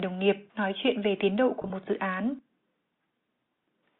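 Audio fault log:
1.62–1.70 s, packet loss with pitch repetition: across these 80 ms the sound turns briefly held and buzzy, as if a pitch were stuck for a moment, in several short bursts rather than one dropout. About 50 ms of audio went missing in scattered gaps, the longest 20 ms, which fits roughly five lost 10 ms packets. The receiver filled each gap by repeating the last pitch period. Because every gap is short, the repeats never fade to silence, so they are heard as a slight buzz instead of a gap.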